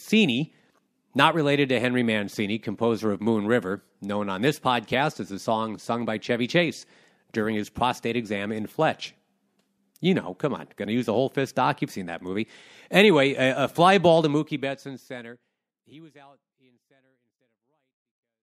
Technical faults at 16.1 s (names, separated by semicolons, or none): none